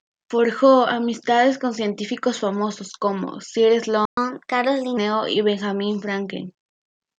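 At 4.05 s the speech cuts out abruptly and the output falls completely silent for 120 ms, until 4.17 s, before carrying on. This is a playback stall: the gap sits in the middle of the flow rather than at a natural pause, so it reads as a dropout, not a breath. The likely cause is the player running short of buffered data, or its playback thread being held up, so nothing reached the output until it recovered.

From 4.17 s to 4.97 s the speech comes back sounding hurried and slightly chipmunk-like. It runs at 1.15 times normal speed, with the pitch raised by roughly two semitones, and then settles back to its natural rate and pitch. This is catch-up at higher speed. To recover the 120 ms lost in the stall, the player resamples its backlog and plays it faster, and because it resamples rather than time-stretches, the speed-up lifts the pitch as well.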